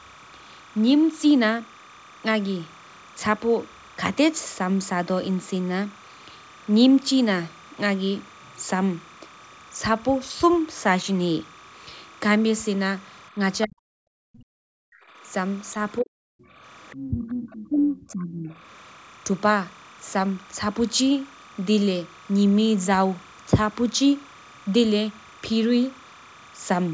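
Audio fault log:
throughout: timecode bleed. A steady chirping warble sits behind the speech, flipping between two pitches near 1 kHz and 2 kHz at roughly 25 dB below the talker. That is the audible signature of linear timecode leaking in from an adjacent track or cable. Its biphase square wave alternates between those two frequencies as the bits change, and the rhythm of the chirp fits 29.97-frame code. It never stops, so it is most exposed in the gaps between phrases.
13.65–13.82 s, 14.21–15.02 s, 16.01–16.12 s, 17.03–18.54 s: speech suppressed in double talk. The talker drops out in chunks, by around 40 dB in the first three stretches and by around 25 dB across the longest one, from 17.03 to 18.54 s. This is likely an echo canceller losing track during overlapping talk. Unable to tell the local voice from the far-end echo, it ducks everything, so the near talker falls away in pieces.
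16.40–16.46 s, 16.88–17.28 s, 17.51–17.69 s: other side's voice leaking through. A second voice surfaces in fragments. The first is a faint scrap around 40 dB below the talker, and the later two are much plainer at roughly 15 dB down. The likely cause is residual far-end audio from the device loudspeaker that the canceller failed to subtract from the microphone. The later two fragments overlap the suppressed stretch at 17.03–18.54 s, which fits the double-talk confusion. The band-limited sound, with nothing above 8 kHz, comes from ordinary call microphone processing.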